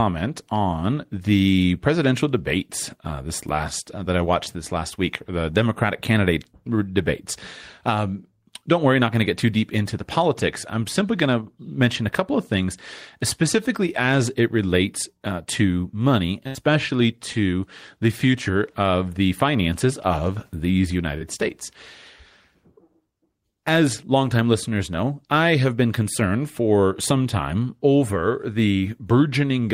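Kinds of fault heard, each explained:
Burst of packet loss: after "relates uh to money", the sound is held and fades for 73 ms, then jumps ahead over missing audio, longer than a smear.
Short concealed packet loss: at 17.33 s and after "the finances of these", brief smears patch a few hundredths of a second, blending back without a held fade.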